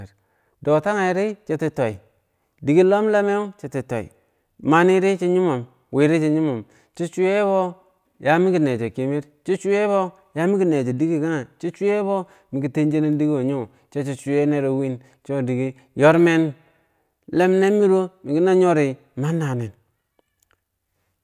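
A short stretch of speech, and nothing technically wrong turns up anywhere in it, so there's no fault to point to here.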